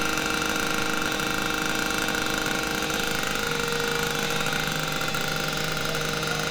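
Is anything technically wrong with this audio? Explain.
No, nothing technically wrong can be heard here.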